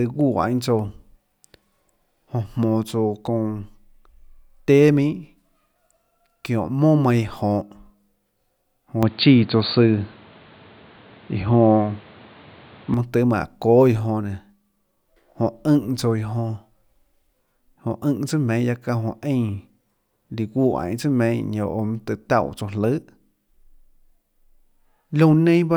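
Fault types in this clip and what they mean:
Input switched to a poorer device: from 9.03 to 12.94 s the speech turns dull and boxy, with nothing above 4.6 kHz, a level shift of roughly 5 dB, and a new noise floor about 30 dB below the voice. The dull sound begins just before "mønâ tøê", with no gap at either switch. This is likely a change of microphone. A plain low-pass filter would leave the level and background untouched, but here all three change at once.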